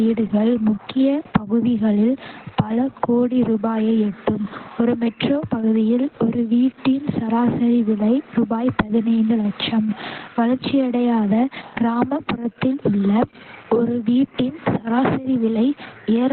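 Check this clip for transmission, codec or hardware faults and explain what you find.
One codec fault runs through the whole recording. Opus voice compression, throughout: the SILK coder has narrowed the band to narrowband, leaving nothing above 4.3 kHz, and coded the excitation coarsely. This heavy damage fits a rate near 8 kbps. The speech comes out muffled, hoarse and faintly robotic.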